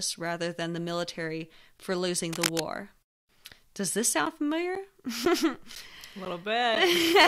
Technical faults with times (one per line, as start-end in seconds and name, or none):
2.32-2.60 cable scratch noise
4.25-6.76 periodic USB or driver dropouts